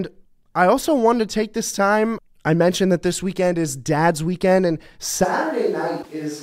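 This is a speech clip. At 5.26 s, right after "weekend and", the sound turns roomy and hollow and stays that way to the end. The bass thins, the level drops by roughly 5 dB, and room noise rises to about 30 dB below the speech. This is likely a switch to a distant microphone. From 6.01 to 6.07 s there is a short glitch, and the audio jumps ahead. The likely cause is a broken MP3 bit reservoir. The damage spans about two frames of roughly 24 ms each.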